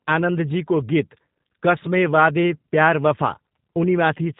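From start to finish the speech carries G.729 codec damage, plainly audible. The encoder rebuilds each 10 ms frame from a vocal tract filter, a pitch predictor and a few pulses, leaving a rough, synthetic edge. Nothing above 3.8 kHz survives, which fits G.729A at 8 kbit/s.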